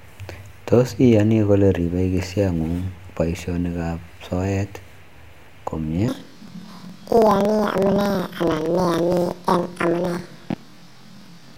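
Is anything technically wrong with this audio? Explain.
Yes. From 6.08 s to the end, the speech suffers from planar audio read as interleaved. Each 46 ms block, consistent with 2048-sample planar blocks, plays left then right at double speed, sounding an octave high with a 21.5 Hz flutter. A spectrogram shows doubled harmonics with regular seams.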